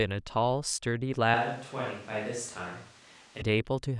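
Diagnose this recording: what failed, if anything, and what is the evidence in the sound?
Switch to a distant microphone, 1.34–3.42 s: speech abruptly turns roomy, hollow and quieter with more room noise, likely a failed close microphone at the analogue stage.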